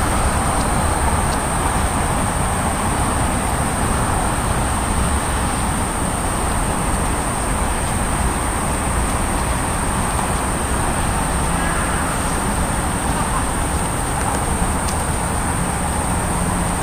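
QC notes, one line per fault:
2.12–2.16 s and 5.76–5.80 s, chunks out of order: a 20 ms chunk plays one slot late, swapping with its neighbour, giving a brief jumbled blip with hard joins.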